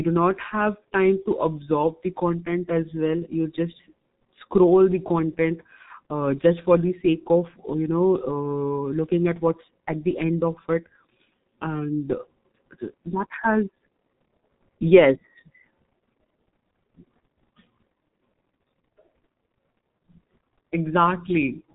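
From start to finish, the speech carries heavy G.723.1 codec damage. This early internet-telephony codec squeezes audio into 30 ms frames at a rate that fits 6.3 kbit/s. Nothing above 4 kHz survives, so the sound is muffled and dull. The voice model updates slowly between frames. Consonants smear into the vowels around them. The tone turns hoarse and rough throughout.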